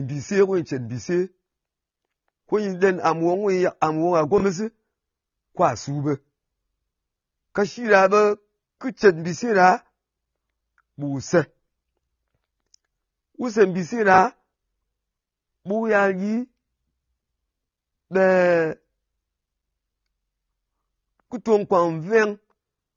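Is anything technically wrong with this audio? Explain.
Yes. Throughout, the speech sounds dull and smeared, with a fizzy, warbling edge on sibilants. It is likely AAC compression at a low bitrate, around 24 kbps, quantising coarsely against a hearing model. A spectrogram shows nothing above 6.9 kHz.

At 4.38 to 4.42 s and again at 14.14 to 14.18 s, chunks are out of order. A 20 ms block plays one chunk late, swapped with its neighbour, giving a brief jumbled blip. The waveform shows three abrupt discontinuities at each spot.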